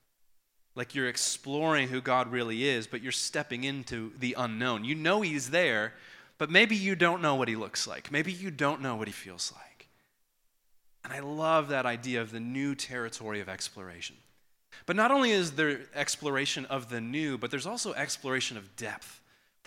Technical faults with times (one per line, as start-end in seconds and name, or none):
4.17 audio missing between chunks
9.12 audio missing between chunks
19.02 audio missing between chunks